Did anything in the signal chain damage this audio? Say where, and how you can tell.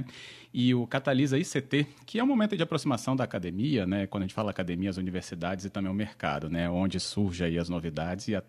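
No, nothing along the chain seems to have damaged this speech recording, and there's nothing here that points to a problem at any stage.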